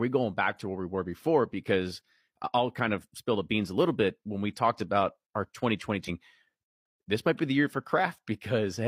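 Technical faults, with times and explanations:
6.04 to 6.09 s, damaged data in a compressed stream: there's a quick glitch here, only about 50 ms long, cutting across the speech. A stretch of the compressed data got corrupted, so the decoder couldn't make sense of the frames at that spot and lost its place in the stream. It then had to hunt for the next valid frame header before normal playback resumed, which is why it comes out as a brief chirp, squawk, click or short hole rather than clean audio.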